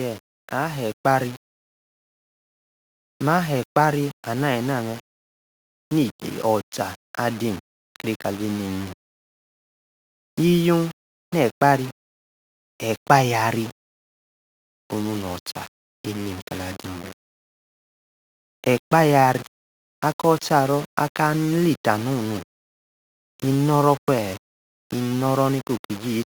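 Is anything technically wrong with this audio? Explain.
Yes, there are two faults.

Throughout the speech there is low bit depth without dither, likely from the signal being rounded to very few levels, which fits about 6 bits. The rounding error tracks the speech, so quiet passages turn gritty and grainy, with distortion around 20 dB below the signal.

From 0.54 to 9.02 s there is automatic gain rising: the gain control judged the input too quiet and raised its gain gradually by about 5 dB. Speech and background swell together slowly over those several seconds.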